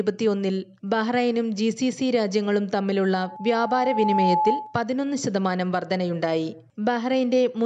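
Loudspeaker feedback squeal runs from 3.15 s to 4.82 s. A single tone at 860 Hz rises out of the sound over roughly a second and ends up about 5 dB above the surrounding audio. A microphone was picking up the loudspeaker it was driving, and at 860 Hz the round trip gained more than it lost. Each pass made that tone louder, so it swelled into a sustained squeal until it cut off at 4.82 s.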